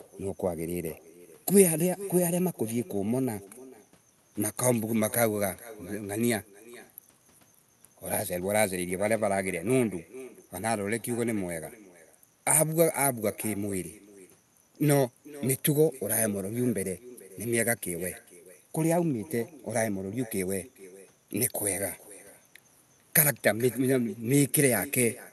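Echo with no canceller runs throughout the speech, from the start to the end of the clip. The far end is playing the call through a loudspeaker, and its microphone picks that sound up and sends it straight back with nothing subtracting it. Each phrase is trailed by a faint, thin copy about 20 dB below the speech, arriving roughly 0.4 s later. It sits on top of the call codec's bandwidth limit near 12 kHz.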